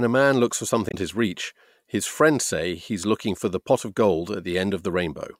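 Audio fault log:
0.88–0.94 s, damaged data in a compressed stream: right after "a man looks for", a short glitch interrupts the speech for about 65 ms before "his reach his friends". Corrupted bytes made the decoder misread the frames, lose sync and resume at the next valid header.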